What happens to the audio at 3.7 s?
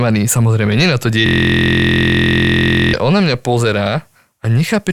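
Nothing goes wrong at 3.7 s; the speech carries on intact through that moment with no dropout, click or distortion.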